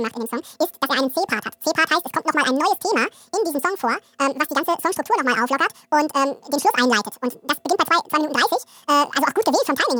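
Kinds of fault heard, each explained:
Audio read two samples at a time (double speed), throughout: the playback side takes each pair of consecutive samples as a single frame, as if the stream held two channels or samples of twice the width. That halves the running time, so this speech plays at twice its proper speed and sits a full octave, 12 semitones, too high. Any strong content above a quarter of the sample rate folds back below the new limit.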